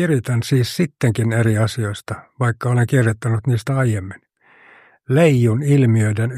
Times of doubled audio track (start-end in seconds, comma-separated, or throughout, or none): none